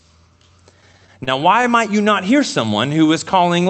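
From 0.81 to 1.65 s, just before "might you not hear", the speech shows repeated stalls (stutter). Packets reached the receiver late, so its jitter buffer ran dry seven times. Each time it stretched the last sound to fill the hole, for about 97 ms in all and at most 31 ms at once, covering 12% of the span. Nothing is lost, but the phrase limps. On a spectrogram, short smeared bands show harmonics frozen in place, and the waveform shows small repeated cycles.

From 2.66 to 3.61 s, after "might you not hear", comes a jitter buffer slow-down. To rebuild its reserve, the receiver duplicated single pitch periods and pause fragments over and over, adding 92 ms and playing at 91% speed with the pitch unchanged. The sound is drawn out. A spectrogram shows formants and pauses stretched sideways at steady harmonic spacing. The waveform shows near-identical periods repeated back to back, and the high band ends near 8 kHz from the call codec.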